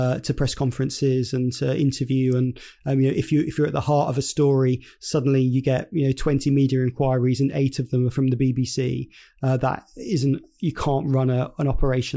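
No technical faults can be heard.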